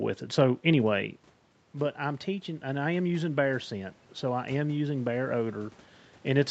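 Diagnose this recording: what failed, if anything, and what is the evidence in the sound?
Automatic gain rising from 1.74 s to 5.79 s, in call processing: the input falls by about 9 dB as the talker moves away near one second, and the gain control climbs about 6 dB over four seconds, lifting speech and room noise together.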